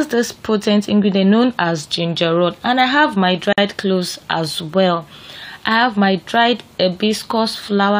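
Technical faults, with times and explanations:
3.53 to 3.58 s, gap at a join of encoded pieces: a 50 ms silence cuts into continuous sound, with smeared edges, then the sound resumes where it stopped. Pieces about 4 s long were encoded separately and joined untrimmed, leaving encoder start delay and last-frame padding.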